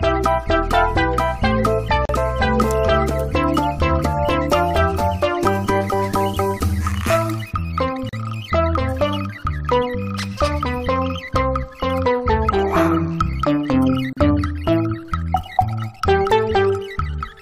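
Separately encoded six-second pieces were joined without trimming encoder delay and padding, leaving gaps at a join of encoded pieces: 37 to 38 ms silences at 2.05, 8.09 and 14.13 s with smeared edges.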